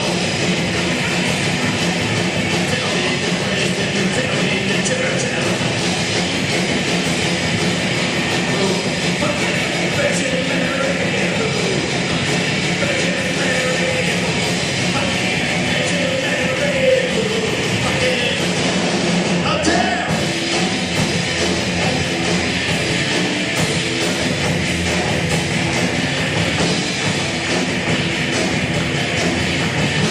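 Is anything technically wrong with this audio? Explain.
No, nothing technically wrong stood out on listening to this audio.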